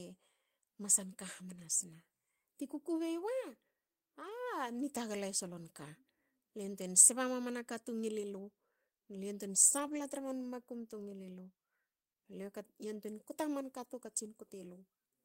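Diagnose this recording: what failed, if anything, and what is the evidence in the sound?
Network stage: each lost packet was rebuilt from error correction. Rougher, noisier speech appears at 1.55–1.65 s, 4.21–4.31 s, 8.19–8.25 s, 9.71–10.21 s and 13.83 s. No gaps occur. The decoder played low-bitrate copies carried in the following packets.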